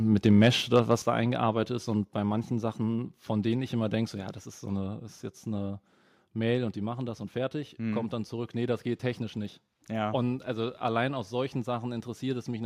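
From 0.27 to 0.94 s the speech shows microphone overload: the loudest peaks flatten against the converter's ceiling, adding a harsh, crackling edge. The input level was likely set too high, pushing peaks about 4 dB past full scale and clipping a small share of samples.

At 1.02 s the microphone volume is stepped down. Speech and background fall together by about 6 dB in a single abrupt drop, right after the distorted passage, likely as the call software cuts the device's input gain in response to the clipping.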